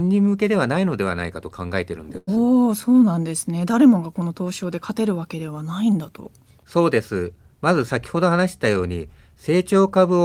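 At 2.17 to 2.29 s there is a short stall from a late packet. A packet arrived late, the jitter buffer ran dry, and the receiver held the last sound for about 98 ms before resuming exactly where it left off. The result is a drawn-out, faintly buzzy sustain. Unlike a loss, no audio is missing.

Just after that, at 2.35 to 2.38 s, comes a short concealed packet loss. About 40 ms of audio never reached the decoder. The receiver filled only a brief stretch with extrapolated sound and blended back in, trimming roughly 30 ms of delay. This is heard as a quick smear or wobble rather than a hold, because real audio has been skipped, not waited for.

From 2.81 to 3.13 s a jitter buffer slow-down stretches the speech to 89% speed. Repeated pitch periods add 43 ms to rebuild the buffer's reserve. Pitch stays put while sounds lengthen. This spreads over several hundred milliseconds, where a stall freezes a single sound.

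From 8.16 to 9.51 s a jitter buffer speed-up runs the speech at 107% speed. The receiver cuts short pitch-period pieces to shed about a tenth of a second of excess delay. It sounds slightly hurried at unchanged pitch, the mirror image of the earlier slow-down.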